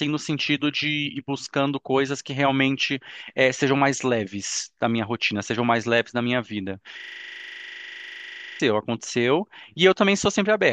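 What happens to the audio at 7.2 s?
A system hang loop is underway at 7.2 s. It runs from 7.00 to 8.60 s. The computer or its audio driver stalled while the sound hardware kept replaying the same ring buffer, so one 40 ms slice of speech repeats exactly, about 40 times in a row. That loop length fits a buffer of roughly 40 ms. At 25 repeats per second, the speech gives way to a harsh, rapid, rattling buzz until normal playback returns.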